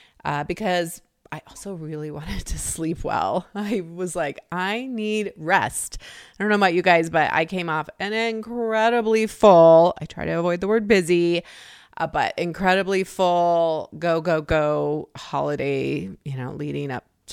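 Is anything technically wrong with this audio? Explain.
Yes, there is one fault: a loud pop from 14.51 to 14.54 s, just after "incredibly full go go". A single voltage pulse, likely from a plug, switch or static discharge, lands on the signal and peaks roughly 5 dB above the speech. Unlike a dropout, the speech continues underneath without any gap.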